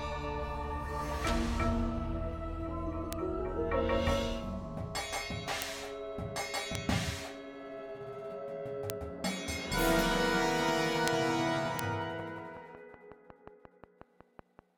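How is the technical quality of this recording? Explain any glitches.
The recording has two kinds of glitch. Bit error spikes give single sharp ticks at 3.13, 5.62, 6.75, 8.90, 11.08 and 11.79 s: one to three samples jump to about -8 or -14 dBFS and snap straight back. A train of clicks runs from 11.64 to 14.6 s, with around fifteen similar pops at a steady 5.4 per second, a bit louder than the sound underneath. That's likely interference from nearby gear or a faulty connection.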